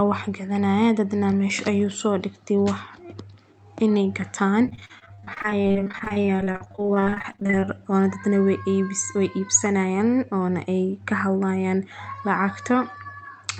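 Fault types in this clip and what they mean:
Repeated packet loss (robotic sound), 4.65 to 7.75 s: Over this stretch the audio keeps losing packets, around fifty short holes with none longer than about 39 ms. Each gap is patched by stretching the sound that came just before, so roughly a third of the span is concealment rather than real audio. The quick run of patch-then-drop makes the speech choppy, with fragments missing, against the call path's top end of 8 kHz.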